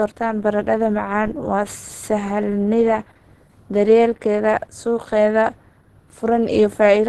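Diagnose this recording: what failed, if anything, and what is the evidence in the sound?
Codec stage: throughout, the speech sounds muffled, hoarse and grainy, and a spectrogram cuts off flat at 12.2 kHz. This is likely Opus compression, its hybrid mode starving bands at a bitrate near 16 kbps.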